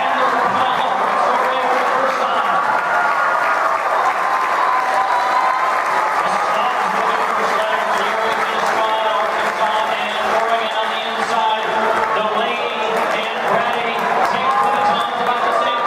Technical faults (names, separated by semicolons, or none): none